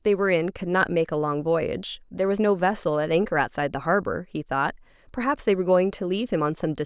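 Nothing stood out on listening to this speech recording.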